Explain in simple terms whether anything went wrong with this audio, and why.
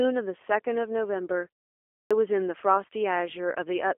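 Two things went wrong. The whole clip has passed through the G.729 codec, a low-rate phone-call format that rebuilds speech from a rough model of the voice and discards everything above about 3.7 kHz. That is why the speech sounds thin, slightly rough and synthetic from start to finish.

There is also a clipped start after a pause at 1.93 s. After about half a second of quiet, the playback device had dozed off and took roughly 0.18 s to wake, so the speech resumes abruptly with its opening sound missing, up to 2.11 s. The quiet gap itself going silent is expected.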